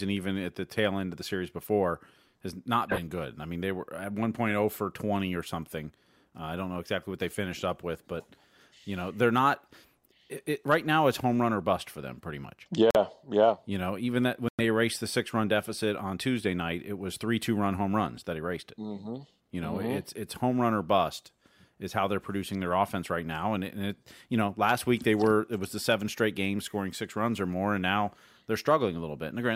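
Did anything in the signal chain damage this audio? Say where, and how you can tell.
Yes, a Bluetooth stall at the wireless playback link, likely from interference delaying packets until the headphones' buffer ran dry. The speech cuts to silence for 44 ms at 12.91 s, after "for them pretty much", and 103 ms at 14.49 s, between "know even that when" and "erased the", then resumes.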